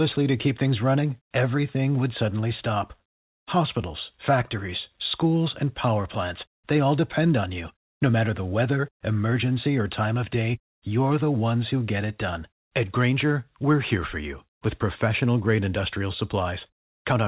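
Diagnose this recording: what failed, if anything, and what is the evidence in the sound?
Nothing failed; the speech comes through intact.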